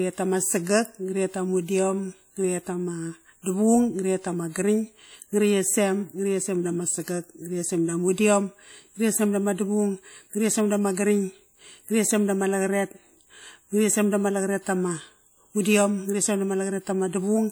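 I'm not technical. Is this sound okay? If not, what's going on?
No. The speech was likely squeezed with WMA compression, which throws away detail, so the whole clip sounds washy and ringing, with a hiss rising and falling alongside the voice.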